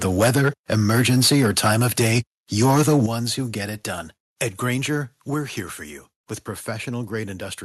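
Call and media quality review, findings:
Microphone overload, 0.04–2.19 s and 2.61–3.06 s: harsh crackle on the loudest syllables. Likely input gain set too high, so peaks run about 8 dB and about 6 dB past converter full scale. The tops are sliced off, a few percent of samples in the first stretch and around a tenth in the second. Waveform shows flat-topped peaks; spectrogram shows broadband vertical smears on the peaks.

Microphone volume stepped down at 0.24 s (about 2 dB), 3.06 s (about 8 dB, just before "who get it done") and 5.34 s (about 4 dB, just before "here for you with"): sudden level drops in voice and background alike. Likely call-software AGC cutting device input gain in single steps after detecting input that was too loud. Waveform envelope and noise floor both drop in a clean step; spectrogram dims uniformly across all bands.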